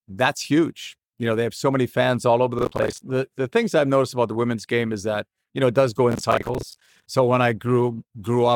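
Processor overload crackle runs from 2.59 to 3.01 s, between "many fans all over" and "the things I've noticed", and again from 6.12 to 7.06 s after "know it does go". Dozens of roughly 10 ms buffers miss their deadline, each replaced by a hard-edged scrap of old audio, producing gritty tearing.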